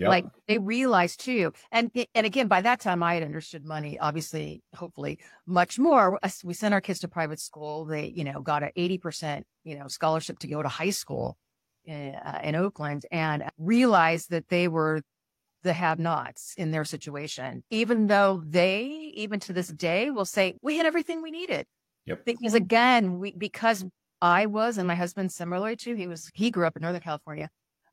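A speech recording with no technical faults to point to. Nothing in it calls for a time or a cause.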